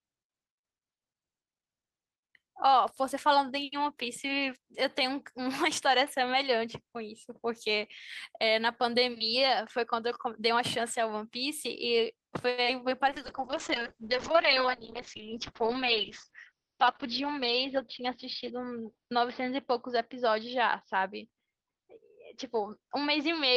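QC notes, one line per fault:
12.49 to 12.60 s, short stall from a late packet: a packet arrived late and the jitter buffer ran dry, so the last sound was held for 85 ms, with nothing lost.
12.64 to 12.68 s, short concealed packet loss: 20 ms of audio never reached the decoder, and the receiver extrapolated over the gap, giving a brief smear or wobble.
13.09 to 23.56 s, call bitrate drop: the encoder fell from 32 to 7 kbps and bandwidth narrowed from 20 kHz to 6 kHz, so speech turns muffled and rough.
14.90 to 15.77 s, jitter buffer speed-up: the receiver trimmed pitch-period slices, about 50 ms in all, to shrink excess delay, so speech runs 4% faster at unchanged pitch.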